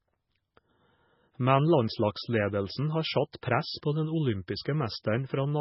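Heavy MP3 compression, likely at a very low bitrate around 16 kbps, runs through the whole recording: the encoder starves the treble, leaving nothing above 5.6 kHz, and switches weak frequency lines on and off, so the speech sounds dull, watery and swirly, with smeared consonant attacks.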